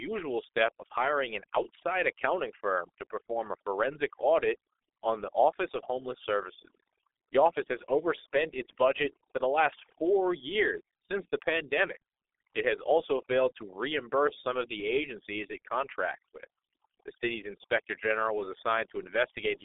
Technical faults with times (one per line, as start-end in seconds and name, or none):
0.00-19.65 overdone noise removal
0.00-19.65 G.723.1 codec